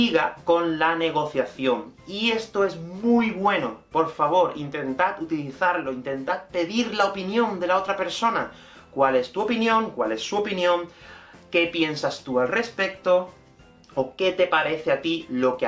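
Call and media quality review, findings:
No faults found in this recording. No component or mechanism implicated, nothing to escalate.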